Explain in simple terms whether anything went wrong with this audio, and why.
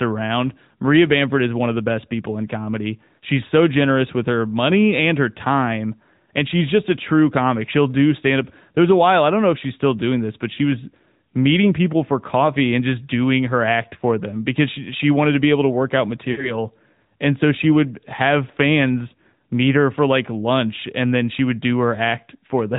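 Yes, a couple of things. The whole recording went through the AMR narrowband mobile codec, so everything above 4 kHz is gone and the voice sounds plainly buzzy and a bit synthetic, like an old phone call.

There are also lost AMR speech frames. At 10.54 s, between "still doing this but" and "was meeting people for", about 40 ms drops out, giving a brief dip or warble. At 16.32 s, right after "able to work out", a longer gap smears and fades out for a moment.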